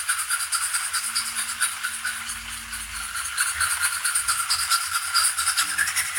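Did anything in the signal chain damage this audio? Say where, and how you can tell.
Yes, a wrong sample rate at playback, from start to finish. Everything runs 1.38 times fast and about 5.5 semitones sharp, which fits 32 kHz material played at 44.1 kHz without conversion. A spectrogram shows every component shifted upward, with events squeezed closer in time.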